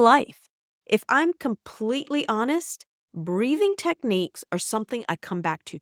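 No technical faults can be heard anywhere in the speech recording.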